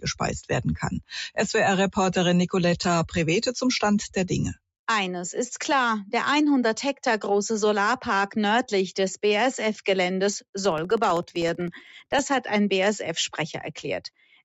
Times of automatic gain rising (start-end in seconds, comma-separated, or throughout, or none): none